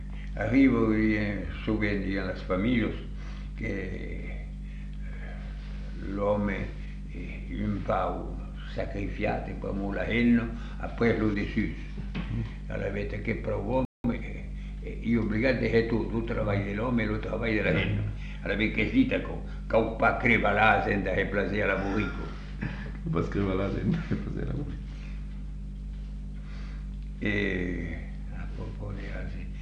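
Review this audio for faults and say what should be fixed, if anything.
A playback stall at 13.85 s silences the output for about 190 ms, likely from the player starving for data; the waveform shows a flat gap, the spectrogram a blank column.

Time-compressed catch-up follows from 14.04 to 14.42 s, running 1.5 times fast at normal pitch, as spliced, cross-faded fragments show compressed, smeared spectrogram detail.

Enlarging the playback buffer and keeping the audio thread from blocking would prevent both the stall and the hurried recovery after it.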